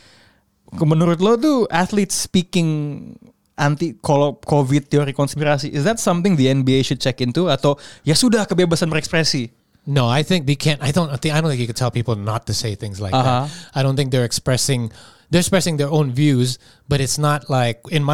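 No technical faults can be heard anywhere in the recording.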